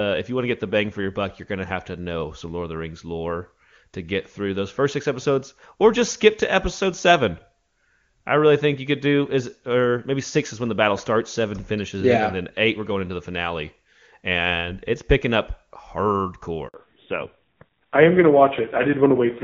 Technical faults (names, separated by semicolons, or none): handover gap; fallback to narrowband